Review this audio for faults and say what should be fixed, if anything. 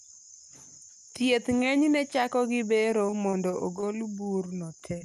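Repeated packet loss (robotic sound) runs from 2.91 to 3.84 s. Across this stretch several short holes open in quick succession, the longest about 25 ms. Each one is patched by extending the preceding sound, so roughly 110 ms is synthetic and about 80 ms of real speech never arrives. That is about 12% of the span, enough for the speech to turn choppy. To prevent it, stabilise the network route and enable forward error correction so isolated losses can be rebuilt instead of guessed.

A short stall from a late packet occurs at 4.24 to 4.28 s. One packet arrived after its playout moment, and the jitter buffer had nothing to play. The receiver held the last sound for about 20 ms and then resumed exactly where it left off, so nothing is lost. The cost is a brief drawn-out moment with a slight buzz or dip, matching a 20 ms jump in delay. To prevent it, give the jitter buffer enough headroom to absorb delay swings of this size.

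Short concealed packet loss appears at 4.98 to 5.02 s, right at the end of the clip. About 20 ms of speech failed to reach the decoder in time. The receiver covered the hole with roughly 23 ms of continuation built from the preceding sound and then blended back in, which leaves a small smear or wobble where a short sound may have dropped out. To prevent it, reduce packet loss on the link and use redundancy or error correction to recover single missing packets.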